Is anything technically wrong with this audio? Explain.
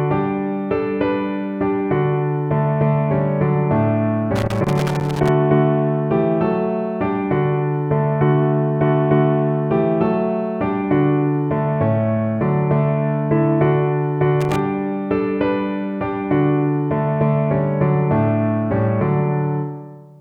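Yes. Loose connector crackle occurs from 4.36 to 5.29 s and again from 14.41 to 14.59 s. A faulty contact chops the signal, causing irregular scratchy bursts.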